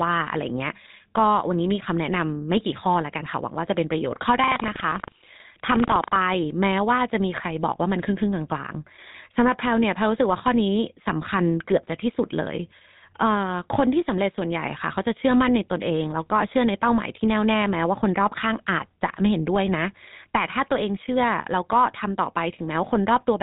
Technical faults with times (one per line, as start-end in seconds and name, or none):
0.00-23.43 GSM full-rate codec
4.40-6.17 buffer tearing